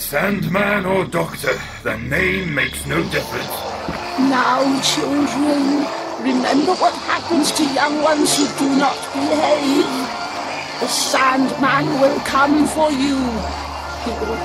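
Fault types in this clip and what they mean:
Bluetooth SBC bit pool drop: from 6.24 to 9.66 s the encoder starves its upper sub-bands, dulling the treble and adding gritty quantisation noise. This fits a bit pool halved from 28 to 14, near 108 kbps. A spectrogram shows the top band emptied and blotchy until it recovers.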